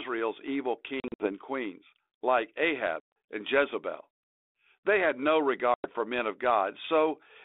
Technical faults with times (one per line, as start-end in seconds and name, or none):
1.00-1.32 packet loss on an ADPCM call
3.00-3.16 packet loss on an ADPCM call
5.74-5.87 packet loss on an ADPCM call